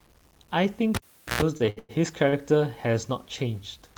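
Speech throughout carries low bit depth without dither: a grainy distortion that tracks the signal, roughening quiet passages and sputtering on the faintest ones, sitting about 35 dB below the signal. That likely comes from truncation to roughly 9 bits, with no dither to decorrelate the error from the audio. Between 0.95 and 1.42 s the cable is pulled and plugged in: a pop, then about 0.43 s of near silence, including a roughly 0.13 s burst of 60 Hz mains buzz as the plug tip makes partial contact, then a second pop as the signal returns. From 1.57 to 1.91 s there are repeated stalls (stutter). The jitter buffer runs dry four times and the receiver holds the last sound to fill the gaps, the longest 103 ms, about 214 ms in all, covering roughly two thirds of that span. Nothing is lost, but the speech drags and stutters. At 2.29 to 2.34 s a short stall from a late packet stretches one sound by about 36 ms, matching a 36 ms jump in delay, before playback resumes where it paused.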